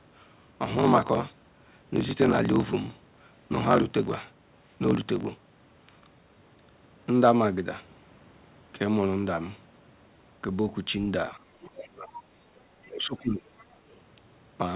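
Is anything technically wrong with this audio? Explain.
Yes. The speech dips and drops out in the last few seconds, and a faint second voice creeps in around those gaps. Everything sits below 4 kHz, which fits a narrowband G.711 call.

Speech suppressed in double talk occurs at 11.33 to 11.40 s, 11.66 to 12.14 s, 12.62 to 12.67 s and 12.85 to 13.48 s. The level falls by a few decibels at first. Later it drops by roughly 15 to 25 dB. The longest hole lasts about 0.7 s. The cause is likely an echo canceller facing both talkers at once. It cannot tell the local voice from loudspeaker echo, so it turns everything down.

The other side's voice is leaking through at 11.61 to 11.66 s, 12.84 to 12.89 s and 13.58 to 13.97 s. The first two are brief scraps. The last runs for about 0.4 s. They sit far below the main speech, roughly 25 to 30 dB down. This likely comes from the far end playing on a loudspeaker while the echo canceller leaves some of it in the microphone signal. 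It sounds faint.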